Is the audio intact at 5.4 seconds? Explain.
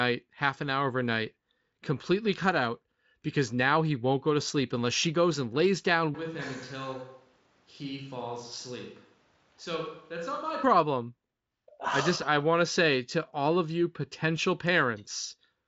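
Yes, at 5.4 seconds the speech is intact, with no fault heard at that moment.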